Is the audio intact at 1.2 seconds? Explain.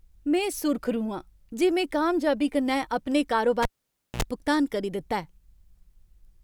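Yes, at 1.2 seconds the speech plays through cleanly, with no dropout, click, distortion or other audible fault at that moment.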